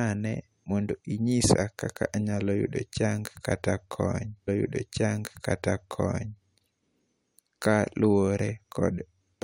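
At 4.47 s the player fetched the same stream segment twice, a stream segment repeated fault: after a small blip, the speech from 4.47 to 6.47 s plays again, adding 2.0 s.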